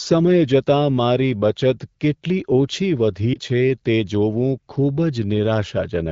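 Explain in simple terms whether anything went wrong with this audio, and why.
Yes, one brief glitch, at about 3.33 to 3.39 seconds. It's lost AMR speech frames: a burst of radio errors corrupted a tiny slice of the call, which fits a single lost frame. The phone's AMR wideband (HD Voice) decoder filled the hole by repeating its last good sound at lower volume, so you hear a quick dip or warble rather than the hard silence or click of a plain dropout, and the voice comes back weak or rough for a moment afterwards.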